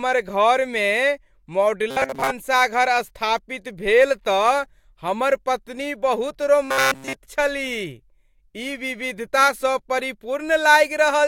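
From 1.91 to 2.30 s and again from 6.65 to 7.13 s, the speech turns to a rigid metallic buzz at 134 Hz, robotic sound from repeated short buffers, partly in the first span and wholly in the second. The likely cause is late audio, with a roughly 7.5 ms block looped in its place.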